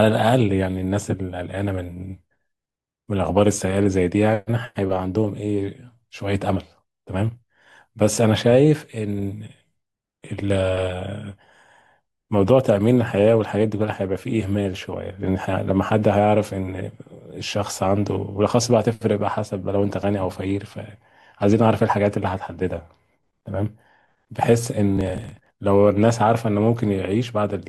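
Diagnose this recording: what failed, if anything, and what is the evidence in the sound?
The driver or buffer stage fell behind: the processor missed runs of buffer deadlines, each roughly 10 ms, and skipped them. The result is processor overload crackle, a brief burst at 10.38–10.58 s and a longer gritty tearing at 24.97–25.57 s.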